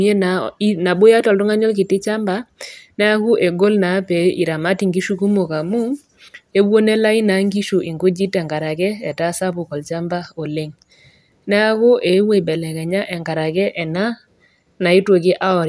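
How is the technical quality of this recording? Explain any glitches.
Listening through the recording, nothing in the sound stood out as a technical problem, so there are no glitches to explain.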